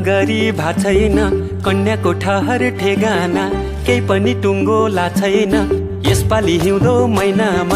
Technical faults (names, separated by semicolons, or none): none